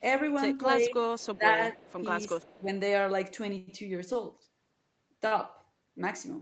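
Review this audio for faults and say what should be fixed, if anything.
Speech suppressed in double talk, likely caused by the echo canceller ducking the near talker, occurs at 0.73–0.98, 1.34–1.59, 1.75–1.80, 1.98–2.03 and 2.59–2.67 s. The speech dips by about 5 to 15 dB. Unlike a stall, nothing is held or stretched; the level simply sags. Better double-talk detection in the canceller would prevent it.

Echo leak is likely behind the faint delayed copy of the speech about 244 ms after the original, heard at 1.18–1.27, 1.80–1.94 and 2.21–2.62 s at about 25 to 30 dB below the speech. It is a repeat, not a dip, which separates it from the suppression. Stronger echo cancellation on the loudspeaker side, or using a headset, would stop it.

Three short stalls from a late packet occur at 3.57–3.69 s (97 ms), 4.13–4.17 s (20 ms) and 5.27–5.33 s (41 ms). Each holds the current sound too long but loses nothing, unlike a dropout, which leaves a gap. 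A slightly deeper jitter buffer would absorb these late arrivals.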